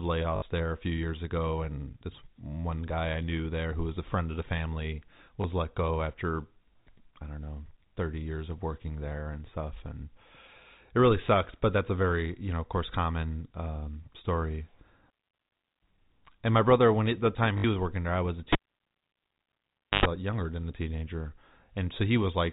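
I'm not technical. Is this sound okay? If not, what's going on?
No, there are two separate problems in this speech recording.

First, packet loss with last packet repeated. Internet calls send sound in tiny chunks, and a few went missing here. The receiving end filled each gap by replaying the last chunk it had, which makes a brief robotic stutter, or a small blip where only one chunk was lost. It happens at 0.36 s (60 ms), at 5.42 s between "friend of the family" and "let go after" (20 ms), and at 17.58 s between "brother when the time" and "was working there I" (60 ms again). The longer ones fit three 20 ms chunks each, so they have a short buzzy quality.

Second, a cable pulled and plugged in. Right after "there I was a", at 18.53 s, you get a pop and the sound drops to near silence for about 1.5 seconds. During the gap, a short hum of about 0.1 s breaks through. That's the 50 Hz mains buzz you hear when only the tip of the plug is touching. 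Then there's another pop at 20.06 s and the speech returns with "uh younger than a". The narrow, phone-like sound is just the normal telephone format.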